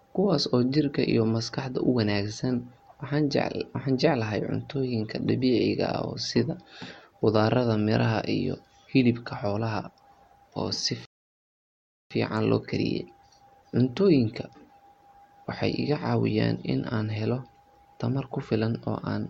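A speech recording with a rebuffering stall from 11.05 to 12.11 s: playback exhausted its downloaded audio and froze, adding about 1.05 s of silence before resuming exactly where it stopped, with nothing lost. A waveform shows a flat gap; a spectrogram, a clean empty column.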